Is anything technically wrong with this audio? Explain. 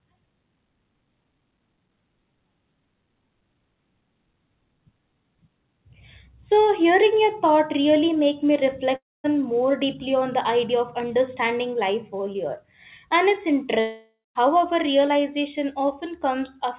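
Yes. There are two long network dropouts, at 8.96 to 9.26 s and 13.80 to 14.37 s. About 0.28 s and 0.56 s of speech are lost. The receiver likely stopped getting packets and stretched the last sound into a fading buzz, which decays to silence before the speech resumes. The narrow sound, with nothing above 4 kHz, comes from the call codec and fits G.711 mu-law.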